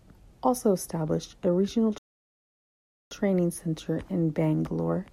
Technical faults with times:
1.98-3.11 rebuffering stall

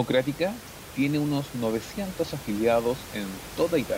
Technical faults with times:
none

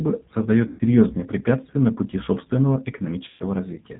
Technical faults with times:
0.00-3.99 G.729 codec
0.67-0.81 VoIP packet loss concealed by the speech codec
3.28-3.44 VoIP packet loss concealed by the speech codec

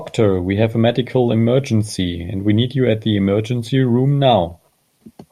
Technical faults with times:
none

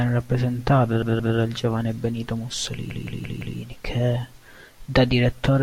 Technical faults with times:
1.02-1.37 repeated buffer
2.90-3.58 repeated buffer

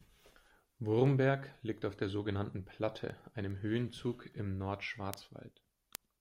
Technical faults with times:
0.24-5.95 word clock ticks

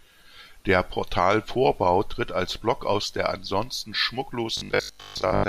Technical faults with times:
4.57-5.47 robotic sound from repeated short buffers

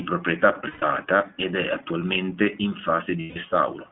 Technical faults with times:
0.00-3.91 iLBC codec
0.68-0.83 lost iLBC frames
3.20-3.38 lost iLBC frames

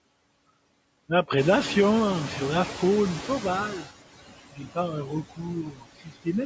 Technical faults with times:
0.00-6.46 noise suppressor artifacts
1.37-3.87 noise suppressor catching up
4.53-6.28 speech cut by the noise suppressor

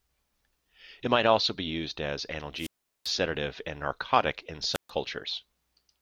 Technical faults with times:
2.56-3.14 wireless microphone squelch dropout
4.73-4.90 wireless microphone squelch dropout

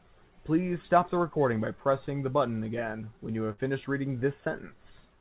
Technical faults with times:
3.52-3.59 burst of packet loss

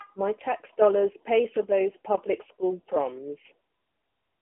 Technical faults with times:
none

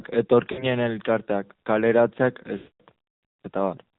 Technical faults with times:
0.00-3.98 AMR narrowband mobile codec
0.52-0.66 lost AMR speech frames
2.58-2.81 lost AMR speech frames

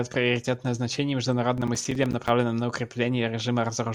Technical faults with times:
1.57-2.29 processor overload crackle

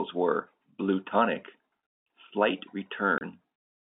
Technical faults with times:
3.18-3.21 packet loss filled with silence

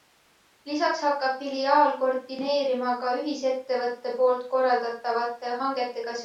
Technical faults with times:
none

